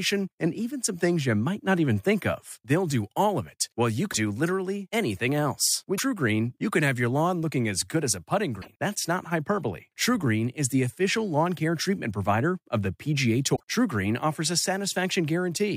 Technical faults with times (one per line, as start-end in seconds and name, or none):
4.12-4.14 broken MP3 bit reservoir
5.97-6.00 broken MP3 bit reservoir
8.61-8.68 broken MP3 bit reservoir
13.55-13.61 broken MP3 bit reservoir